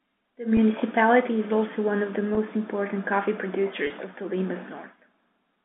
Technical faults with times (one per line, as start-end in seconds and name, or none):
0.57 packet loss with pitch repetition
2.35-2.37 packet loss with pitch repetition
3.87-3.90 packet loss with pitch repetition